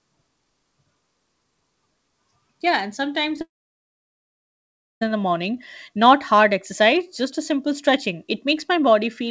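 Short concealed packet loss at 3.36 to 3.39 s, in speech carried over a G.722 call path with nothing above 8 kHz: about 20 ms of audio reached the decoder too late, so the receiver stretched the preceding sound for roughly 13 ms and blended back, leaving a brief smear. Long network dropout from 3.41 to 5.03 s: the sound trails off in a short fading continuation, then falls to about 1.5 s of silence, and resumes at 5.03 s with that stretch missing, likely because packets stopped arriving for about 1.6 s.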